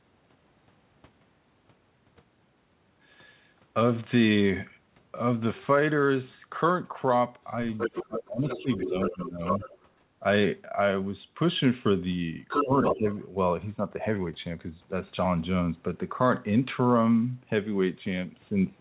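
From 7.43 to 8.06 s, and again from 8.48 to 9.78 s, the other side's voice leaks through. A second talker sits about 5 dB, then about 10 dB, under the main speech, likely loudspeaker echo the canceller missed. It shows as overlapping harmonic stripes within the 4 kHz band of the call codec. Between 7.88 and 9.67 s, speech is suppressed in double talk for roughly a second in total, likely because the canceller treated both voices as echo and turned everything down. The waveform envelope dips by up to about 20 dB, and the spectrogram fades in patches. From 12.48 to 13.2 s, the leak returns at roughly equal level to the speech. Within it, from 12.63 to 13.05 s, a shorter suppression of up to about 15 dB punches a brief gap in the waveform.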